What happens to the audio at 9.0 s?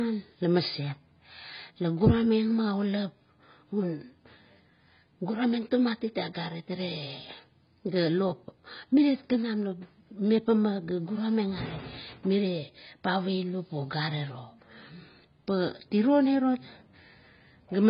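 At 9.0 s the speech sounds dull and smeared, with a watery, warbling texture on held sounds and a fizzy edge on sibilants. There is nothing above 5 kHz, and this continues through the whole clip. The likely cause is heavy AAC compression. At a very low bitrate, around 16 kbps by the sound of it, the encoder lowers the cut-off and quantises the remaining frequency lines so coarsely that gaps and substitute noise replace detail.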